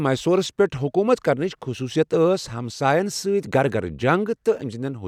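The speech recording has no audible technical faults at any point.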